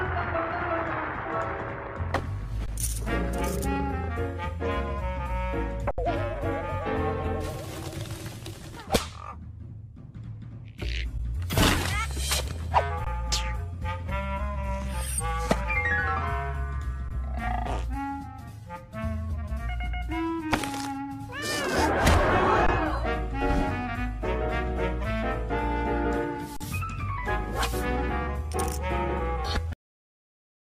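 Seven brief underruns with held sample occur, at 2.66–2.68 s, 5.91–5.98 s, 11.18 s, 13.05–13.07 s, 17.09–17.11 s, 22.67–22.69 s and 26.57–26.61 s, lasting between about 13 ms and 72 ms, with the 5.91 s gap the longest. Each time, the output buffer ran dry and the converter froze on its last value, so the sound drops out almost silently. Because essentially nothing was lost, playback resumes where it paused, and the restarts are soft rather than clicky. On a waveform, each shows as a flat horizontal line. On a spectrogram, each is a thin blank vertical stripe.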